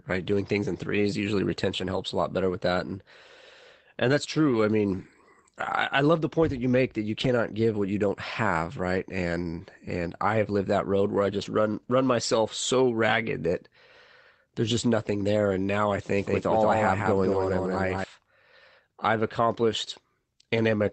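It's a speech clip carried over a call link, and the band tops out near 8 kHz, which fits an Opus call at modest bitrate. There are six spots of lost packet rebuilt from error correction: at 1.95 s, at 4.51 s right after "and that's", from 7.19 to 7.25 s, from 11.41 to 11.47 s after "that road where I", at 17.31 s and at 19.27 s. Nothing drops out. Those moments just go briefly rough and grainy, about 20 ms for the short ones and 40 ms for the 7.19 and 11.41 s spots, which points to one and two lost packets. The decoder is playing the low-bitrate backup copy that rode along in the next packet. There's also a doubled audio track from 16.18 to 18.04 s, starting after "now I". A second copy of the sound trails the original by roughly 200 ms at about 5 dB lower. It's completely dry, with no room colour, and it cuts in and out abruptly. That's most likely the same signal being picked up a second time through a slower path, or an edit leaving two out-of-step copies stacked.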